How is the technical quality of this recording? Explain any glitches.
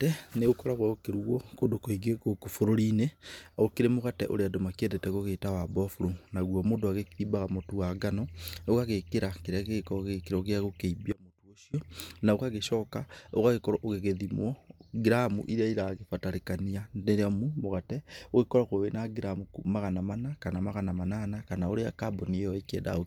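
The speech has one clear glitch, an audio dropout to a faint residue, from 11.12 s to 11.74 s, ending just before "na ũgagĩcoka". For about 0.61 s the speech collapses abruptly to a faint leak roughly 25 dB below its normal level, then snaps straight back. The likely cause is a brief loss of the signal feed while the path downstream stayed live. The hard edges and lingering residue distinguish it from a natural pause, a fade or total digital silence.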